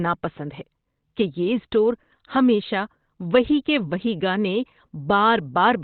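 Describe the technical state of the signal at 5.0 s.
At 5.0 s the speech is band-limited, with nothing above about 4 kHz, and sounds muffled and hoarse, as it does for the whole clip. This is likely Opus compression in its narrowband speech mode, which fits a bitrate around 16 kbps.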